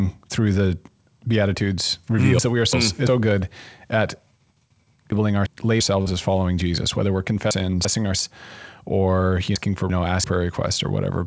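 From 2.39 to 3.07 s, 5.12 to 5.80 s, 7.51 to 8.19 s and 9.56 to 10.24 s, chunks play out of order: in each span a 0.34 s block arrives one block late, so speech jumbles at three hard joins. Unlike a dropout, nothing goes missing.

Between 6.02 and 6.08 s, short concealed packet loss: about 40 ms never arrived, and the decoder stretched the preceding sound to fill it before blending back. This is a brief smear without the reordering of the chunk faults, heard through band-limited audio with nothing above 8 kHz, as a G.722 call path gives.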